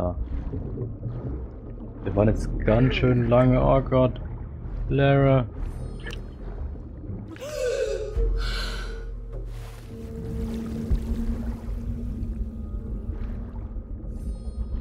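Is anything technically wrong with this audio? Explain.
No, nothing technical stands out here; the audio comes across steady and intact the whole way, with no problems to point to.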